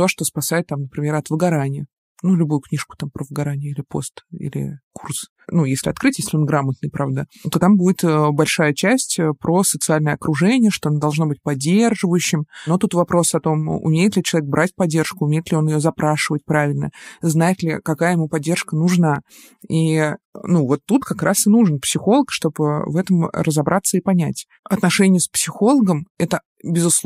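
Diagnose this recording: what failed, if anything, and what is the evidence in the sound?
At 19.16 s, just after "ли какая ему поддержка", the speech skips ahead by a few milliseconds with no silence. This is likely a dropped buffer (overrun) at the driver or buffer stage. Unread samples were overwritten and the edges were joined directly, unlike an underrun, which leaves a gap.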